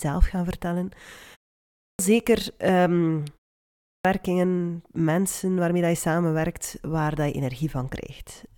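A speech recording with a clipped start after a pause, occurring twice. At 1.61 s, after a silence of about 0.33 s, roughly 0.38 s of sound is swallowed, so "zeker ehm" begins abruptly without its opening. At 3.64 s, right after "zeker ehm" and a 0.34 s gap, about 0.41 s disappears the same way. The output path appears to drop into a low-power state during short silences and needs that long to wake or relock before it passes audio again.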